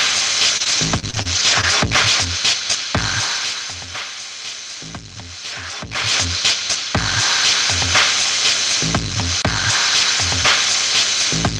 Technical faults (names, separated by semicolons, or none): repeated packet loss (robotic sound)